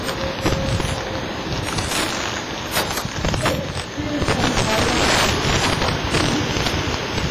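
From start to finish, loud moments break into violent cracks: this is integer overflow. The signal is driven roughly 30 dB past the ceiling, and instead of being held at full scale, every peak that exceeds it wraps around to the opposite extreme, so a few percent of the samples jump across the entire range. Clipping would flatten those peaks into a buzzy, squared-off distortion; wrapping produces sharp, snapping discontinuities that sound far harsher.

Underneath runs heavy transform-codec damage, most likely WMA compression. The audio rings and smears, with a washy hiss that swells and fades with the signal because quantisation noise is spread across long blocks rather than staying close to each event. Quieter detail drops out, and the band stops cleanly at 15.2 kHz. The heavy damage fits a bitrate around 24 kbps. It is a smeared, breathing texture, unlike the short, hard-edged crack of the overflow.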